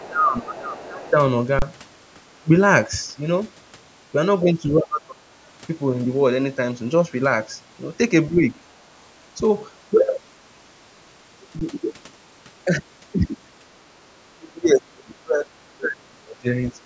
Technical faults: speech suppressed in double talk; other side's voice leaking through; underrun with held sample

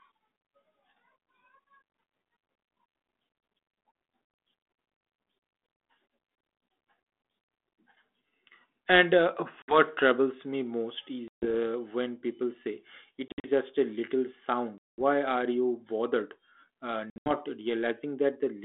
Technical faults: packet loss on an ADPCM call

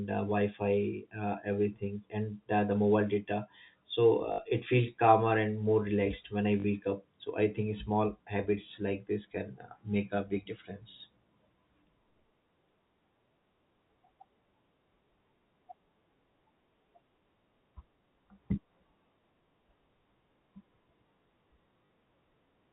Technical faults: packet loss with last packet repeated

